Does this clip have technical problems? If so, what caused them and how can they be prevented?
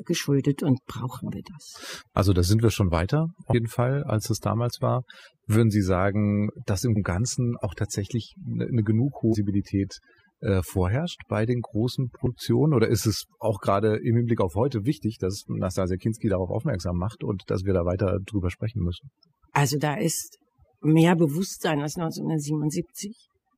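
Yes. Overdone noise removal runs through the whole speech clip. A noise reducer set far too hard is pulling individual frequency bands down whenever they sit near its noise estimate. The background drops and breaks up into small twinkling specks. Quiet parts of the voice are cut along with the noise. Prevent it by using gentler reduction and checking the result by ear before export.

Compressed frames are skipped at 3.49 to 3.53 s, 6.92 to 6.97 s, 9.29 to 9.35 s and 12.22 to 12.27 s. Each time, the audio jumps forward. The jumps are roughly 150, 300, 200 and 50 ms, which fits whole 46.4 ms frames being lost from the file or rejected as damaged by the decoder. Prevent it by storing and transferring files with error checking and verifying their integrity.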